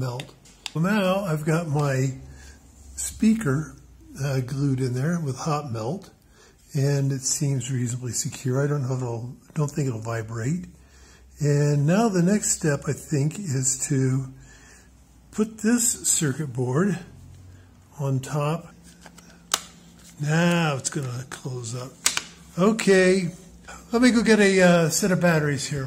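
Hard clipping shows up at 19.54 s as a quick crackle, then at 22.06 to 22.17, 22.67 to 22.99 and 24.04 to 24.78 s. Peaks overshoot by about 11, 9, 3 and 4 dB, get sliced flat, and the added high harmonics give crackle on the peaks.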